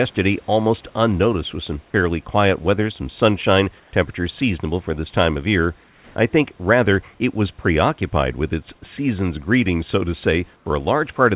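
In three of the pauses the room background gets swapped for comfort noise: at 3.80 to 3.92 s, at 5.84 to 6.16 s, and at 10.56 to 10.66 s. Each time the real background, already about 35 dB down, turns into a smooth, characterless hiss, about 1 dB quieter in the first gap, level in the second, and about 4 dB quieter in the last. That's likely discontinuous transmission, with the receiver filling silence synthetically, all through a narrowband path with nothing above 4 kHz.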